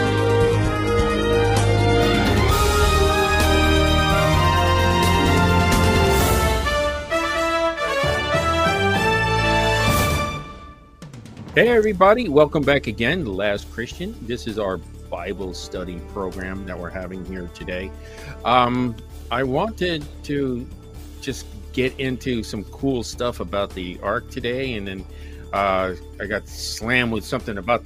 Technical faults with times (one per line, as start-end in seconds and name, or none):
0.00-2.00 adaptive stream starting at a low bitrate